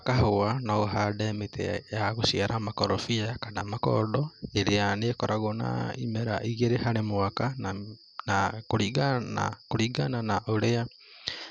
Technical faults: MP2 compression

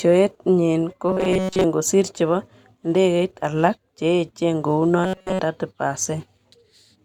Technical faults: robotic sound from repeated short buffers

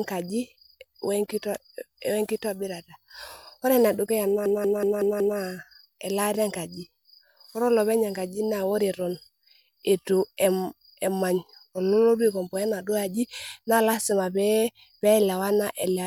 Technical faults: system hang loop

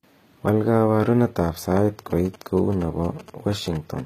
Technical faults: HE-AAC compression; bit error spike; GSM signalling bursts

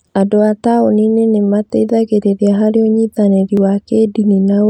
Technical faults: dropped samples

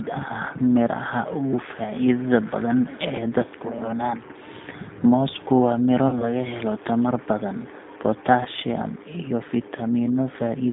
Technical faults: G.729 codec; VoIP packet loss concealed by the speech codec

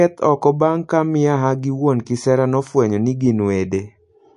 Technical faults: MP3 compression

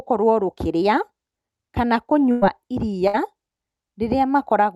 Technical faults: burst of packet loss

